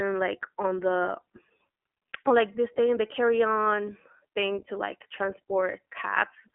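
From start to finish, the speech carries iLBC codec damage, and it is plainly audible. Each 20 ms frame is coded on its own. The voice comes out clear but rough and slightly synthetic. The roughness fits the 15.2 kbps mode. The band sits on a telephone line of about 250 Hz to 3.4 kHz. Nothing passes above 3.7 kHz. Sibilants lose their edge, and the sound is thin and boxy.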